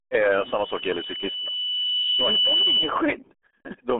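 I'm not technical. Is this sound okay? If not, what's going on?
No, it isn't. The speech has been squeezed through the RealAudio 14.4 codec, an old format built for dial-up modems. It throws away most of the detail to save space. Nothing above about 3.8 kHz survives, and the lowest bass is thin too. The result is muffled and gargly, like talking through a wet cloth. Consonants like s and f go soft. The damage is heavy and runs from start to finish.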